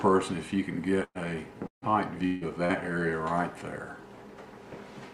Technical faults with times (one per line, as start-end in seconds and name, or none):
1.03-1.18 burst of packet loss
1.67-1.85 burst of packet loss
2.26-2.44 long network dropout
2.65-2.72 short concealed packet loss